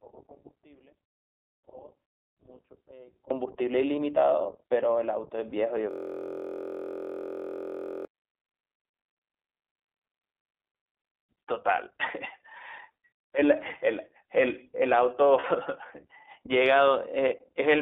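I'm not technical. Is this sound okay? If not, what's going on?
No. The speech goes through the iLBC codec, a phone-style voice codec. Everything sounds thin, with no high tones, and slightly rough and robotic throughout.

From the start until 3.3 s, there is an audio dropout to a faint residue. The speech is almost gone, with only a faint trace left. The likely cause is a lost signal while the line stayed open.

Around 5.50 to 5.53 s, and again around 15.40 to 15.46 s, there are lost iLBC frames. Small pieces of audio went missing and were filled with a brief buzzy, held sound.

From 5.91 to 8.05 s, a system hang loop occurs. The computer froze and replayed one tiny slice of sound over and over, making a steady buzz about 43 times a second.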